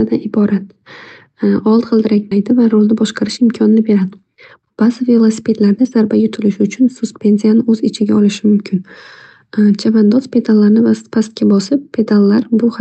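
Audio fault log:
2.31–2.33 s, skip ahead: playback jumps forward with no gap, so around seven tenths of a second of speech never plays and the audio on either side is butted together. A stretch was dropped while later audio was already queued. On the waveform the envelope changes abruptly at one point with no silence between. On the spectrogram, the harmonic lines and formants break off and resume at unrelated positions.
2.86–3.38 s and 4.16–6.10 s, jitter buffer speed-up: the speech runs fast at unchanged pitch, about 8% faster in the first stretch and 11% in the second, which sounds hurried. The buffer was holding more audio than its target, so it repeatedly cut out short pitch-period-sized pieces. Roughly 50 ms goes in the first run and about a fifth of a second in the second. On the spectrogram, syllables and formant movements look compressed in time while harmonic spacing stays the same. 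The waveform shows periods spliced together at matching points without visible breaks.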